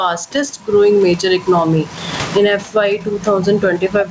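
It's a short speech clip, and the problem running through the whole thing is gain pumping: the room tone, which normally sits about 31 dB under the talker, rides a gain swing of roughly 25 dB. That's likely the input gain set way too hot with a fast limiter clamping on each loud syllable, so everything sounds squashed and breathing. The nothing-above-8 kHz top end fits a G.722 call path at 64 kbps.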